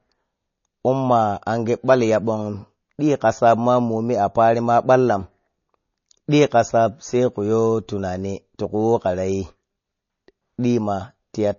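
Throughout, the speech shows plainly audible MP3 compression, likely from encoding at a low bitrate near 32 kbps. Nothing sounds above 6.9 kHz, and weak frequency lines switch on and off between frames. This leaves a watery swirl on s sounds that plain low-pass filtering would not cause.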